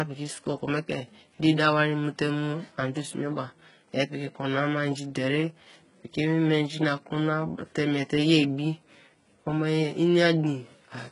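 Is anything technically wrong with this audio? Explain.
Yes. Throughout the speech there is heavy damage of the kind HE-AAC compression leaves. Nothing sounds above about 11.1 kHz. The treble is likely rebuilt by copying lower bands upward at a very low bitrate. So s sounds turn gritty, metallic or lispy.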